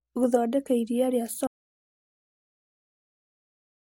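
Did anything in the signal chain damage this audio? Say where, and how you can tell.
Yes. At 1.47 s the speech cuts off abruptly and the rest of the clip is dead digital silence, with no room tone or hiss. This is an audio dropout to silence, likely from the input device or link disconnecting while the recorder kept writing zeros.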